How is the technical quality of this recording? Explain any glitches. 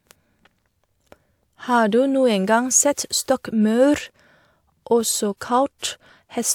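Listening through the recording, nothing stood out as a technical glitch.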